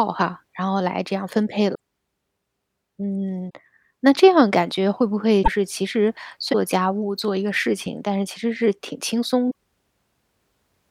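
A likely broken MP3 bit reservoir, with frames (consistent with 26.1 ms frames) dropped so the next frames decode borrowed bytes from the wrong place, causes brief glitches at 1.74 s, 3.49 s, 5.42 to 5.48 s, 6.52 to 6.55 s and 9.50 to 9.52 s, where the speech skips ahead.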